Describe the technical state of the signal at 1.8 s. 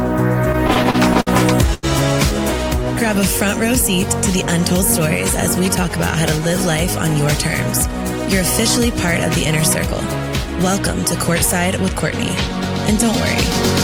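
At 1.8 s there is a short stall from a late packet, running from 1.74 to 1.85 s. The jitter buffer ran dry, so the last sound was stretched for 87 ms, a held, faintly buzzy sustain. Unlike a lost packet, nothing is skipped: the audio resumes exactly where it paused, just 87 ms later.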